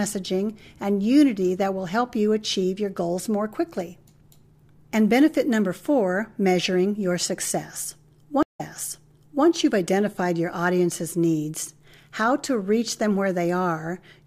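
At 8.43 s a stream reconnect breaks the speech: 138 ms of silence, then playback resumes about 0.89 s earlier, repeating audio, unlike a plain dropout, which only loses it.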